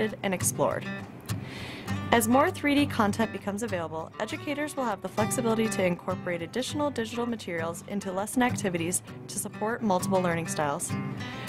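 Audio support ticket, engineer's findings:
One channel drops out, 3.25–5.05 s, 5.93–8.33 s, 8.97–9.79 s. Abrupt level fall of about 6 dB at each onset, full level back at each end. Likely an intermittent connection or feed on one stereo leg. With one side lost, the mono sum carries only half the shared content, hence the 6 dB drop. Check left/right cabling and input per channel.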